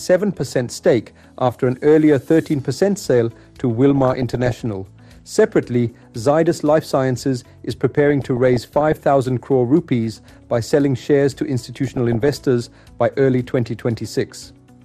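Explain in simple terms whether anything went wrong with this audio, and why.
Two problems can be heard. Throughout, the sound is dull and plainly gurgly, with a grainy roughness. That points to heavy data reduction, likely MP2 compression, which switches off the upper frequency bands when bits run short and coarsely rounds the rest.

On top of that, there are short bursts of DAB burbling at 0.33–0.65 s, 3.90–4.51 s, 8.10–8.97 s, 10.13–10.63 s, 11.87–12.41 s and 13.66–13.82 s. Weak-signal errors slip into the data, making narrow frequency slices briefly jump in level and adding short blips of noise.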